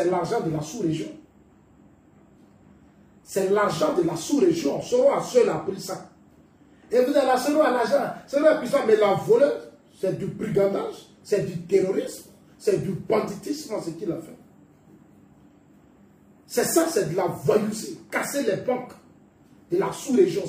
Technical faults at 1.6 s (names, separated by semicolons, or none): none